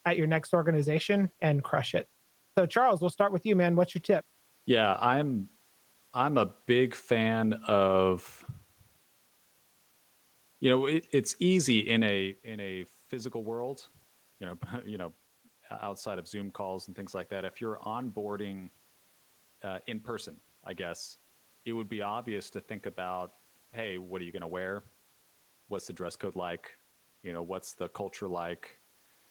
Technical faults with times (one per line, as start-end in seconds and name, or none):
none